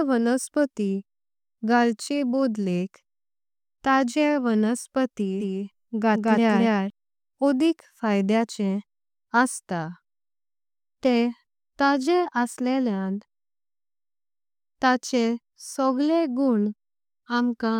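From 5.40 s to 6.90 s the speech is heard twice: a second full-band copy trails the original by about 200 ms, roughly as loud, with no decay or room colour, so it reads as a flat stutter rather than an echo. It cuts in and out abruptly at those points. This doubled audio track is likely the same signal arriving again through a slower capture path, or an edit that left two out-of-step copies overlapping.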